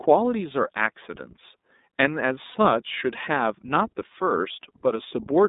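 Throughout, the speech sounds narrow and slightly rough, with a faintly synthetic edge. There is no low bass below about 200 Hz and nothing above about 3.7 kHz. This is the iLBC codec. It codes each 30 ms frame's excitation on its own, within a telephone-width band. The coding damage is plainly audible, and the character fits iLBC's 13.33 kbps mode.

From 2.51 to 2.56 s the speech briefly turns into a held, slightly buzzy vowel-like tone. Then it snaps cleanly back to normal. This is a lost iLBC frame. The gap points to a single missing 30 ms packet. The decoder filled it by repeating the last pitch cycle mixed with noise. Because each iLBC frame stands alone, the next frame decodes correctly and the speech recovers almost immediately.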